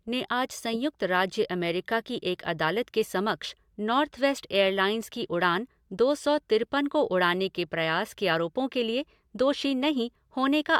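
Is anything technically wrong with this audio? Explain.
No, nothing is technically wrong with this audio.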